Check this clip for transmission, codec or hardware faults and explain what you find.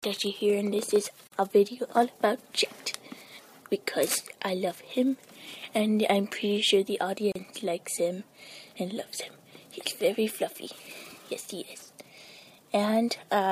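Two short dropouts from a gap at a join of encoded pieces, six seconds apart. At 1.27 to 1.32 s (about 47 ms) and 7.32 to 7.35 s (about 34 ms), separately encoded segments keep their untrimmed start delay and end padding. Continuous sound stops abruptly and then resumes where it left off. A spectrogram shows thin, slightly smeared vertical blank stripes, and the waveform shows flat near-zero notches.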